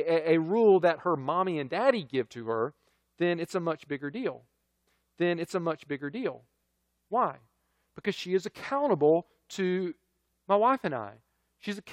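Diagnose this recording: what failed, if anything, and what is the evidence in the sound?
Stream segment repeated at 4.87–6.86 s: after "a much bigger deal", about 2.0 s of speech replays with a blip, because the player queued that segment twice.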